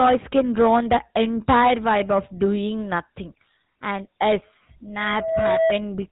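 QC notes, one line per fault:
throughout: GSM full-rate codec. The speech has a plainly audible buzzy, gravelly roughness, as the codec rebuilds the voice from a vocal-tract model driven by sparse, regularly spaced pulses, consistent with a 13 kbps GSM stream. A spectrogram shows nothing above 4 kHz and smeared, pulse-striated harmonics.
4.99–5.80 s: loudspeaker feedback squeal. A single 652 Hz tone swells over about 0.4 s into a squeal, peaking around 5 dB above the speech, because the microphone re-amplifies its own loudspeaker output at that frequency. The spectrogram shows one bright horizontal line, and the waveform envelope grows steadily.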